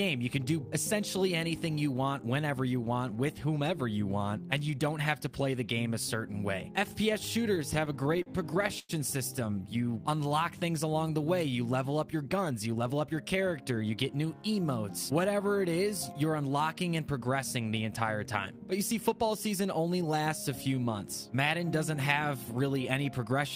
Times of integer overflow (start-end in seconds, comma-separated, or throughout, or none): none